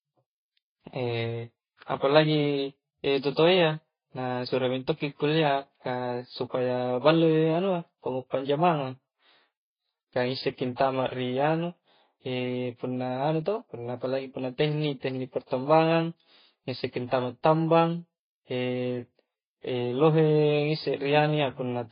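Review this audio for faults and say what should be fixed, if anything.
Throughout the speech, transcoding between lossy codecs likely explains the smeared, swirly artefacts. Content stops near 5.1 kHz, a flat ceiling on a spectrogram, consistent with low-bitrate MP3 re-encoded to Vorbis. Prevent it by encoding once from the original source.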